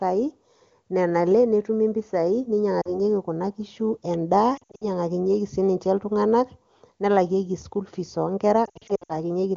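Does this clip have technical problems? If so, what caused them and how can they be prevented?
Yes, there are lost AMR speech frames at 2.81 to 3.00 s, 4.57 to 4.86 s and 8.65 to 9.13 s. Radio errors corrupted short stretches, so the decoder patched them by repeating the last good settings at falling gain. You get a brief warble in the first spot. The later two sound choppier, with gaps of up to 60 ms scattered over roughly a quarter and then nearly half a second. The wideband audio around them is clear. Better radio coverage or stronger error protection on the link would prevent this.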